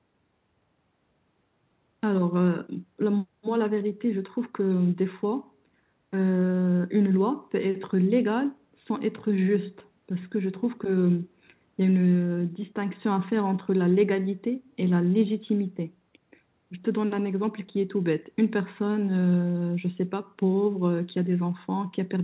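No technical faults are present: the speech has been through a call's microphone processing and a narrowband telephone codec path, likely G.711, which limits the sound to nothing above 4 kHz, and that band limit is normal for such a connection.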